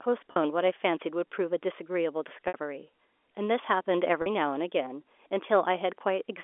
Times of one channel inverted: none

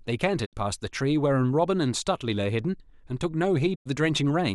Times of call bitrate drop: none

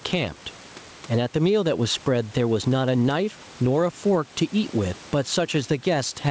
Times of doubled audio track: none

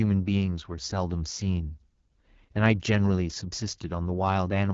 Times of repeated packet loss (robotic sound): none

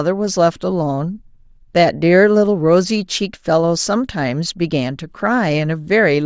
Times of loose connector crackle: none

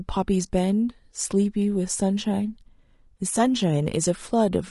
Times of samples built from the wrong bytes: none

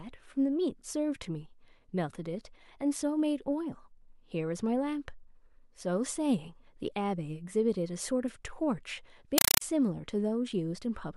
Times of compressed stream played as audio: 9.38-9.61

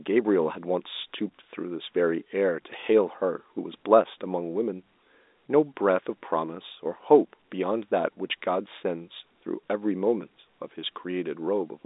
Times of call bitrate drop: none

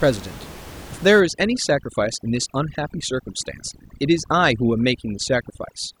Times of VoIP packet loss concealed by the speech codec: none

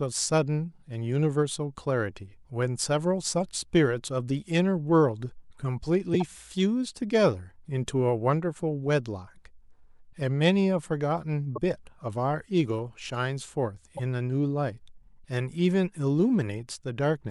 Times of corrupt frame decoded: 6.13-6.22, 11.55-11.58, 13.97-14.00

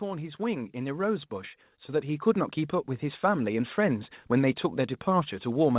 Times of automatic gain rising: 0.05-1.36, 1.87-2.62

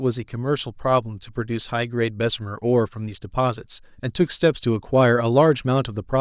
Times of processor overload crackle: none

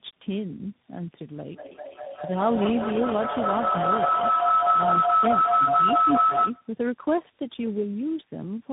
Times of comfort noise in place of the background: none

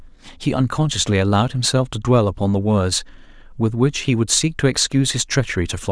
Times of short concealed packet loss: none

